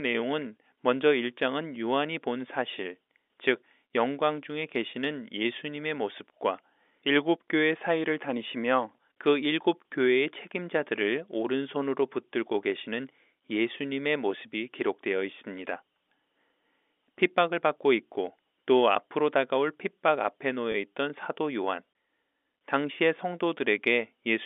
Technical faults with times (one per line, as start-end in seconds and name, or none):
20.72-20.74 packet loss with pitch repetition